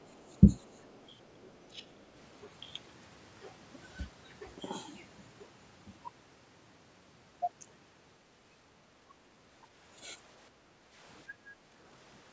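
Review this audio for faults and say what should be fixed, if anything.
Other side's voice leaking through appears faintly at 0.01–0.06 s, 0.59–1.04 s and 1.24–1.37 s, roughly 40 dB below the speech. It is likely loudspeaker sound left over by the echo canceller. Unlike crosstalk, it comes and goes with the far end. Better echo path modelling or a headset would prevent it.

Speech suppressed in double talk shows as dips of roughly 10 to 20 dB at 0.40–0.54 s, 1.33–1.39 s and 1.72–1.82 s, most likely because both sides spoke at once. A dropout would silence everything, but here only the talker sinks. Improved double-talk detection would prevent it.

Background gated by the echo canceller lowers the room sound by about 8 dB at 10.51–10.95 s and about 7 dB at 11.28–11.72 s, for roughly 0.4 s each time. A noise gate would close on silence, but here the room tone dips while the loudspeaker plays. 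Gentler suppression with comfort noise would prevent it.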